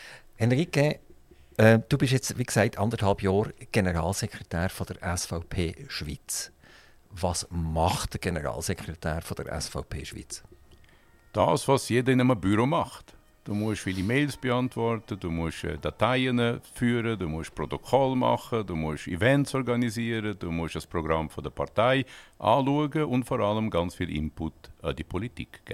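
Nothing in this audio stands out as a technical problem; there's no fault to point to anywhere along it.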